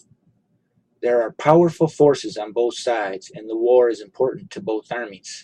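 No technical faults can be heard anywhere in the recording, which holds steady throughout.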